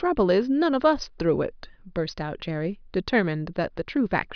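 No technical faults can be heard anywhere in the speech recording; the signal stays continuous and steady throughout.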